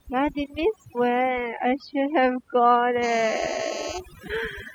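Over the whole speech clip, overdone noise removal has been applied. The reduction was set too aggressively, so individual frequency bands are pulled far down or switched off whenever they sit close to the tool's noise estimate, and the softer parts of the voice are cut with them. The background drops and breaks up into twinkling specks. Unlike low-bitrate codec swirl, the artefacts track how quiet each band is, not the bit budget.

From 3.03 to 3.99 s, a GSM phone buzz appears, about 12 dB below the speech. A nearby 2G phone in a call transmits in bursts about 217 times a second, and the audio circuitry rectifies the radio pulses into a hard, raspy buzz at 217 Hz, rich in harmonics and unrelated to the voice. It stays steady while present. Mains hum sits at 50 or 60 Hz and sounds smoother, while this buzz is higher and gritty.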